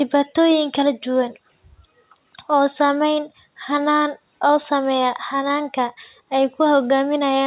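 It's a speech recording that came over a call line, and the whole thing is narrowband, with nothing above 4 kHz, which fits G.711 mu-law at 64 kbps. The one real glitch is a short concealed packet loss at 5.48 to 5.52 s: roughly 20 ms of audio never arrived in time, so the receiver stretched the preceding sound across the gap and blended back in. You hear it as a quick smear or wobble.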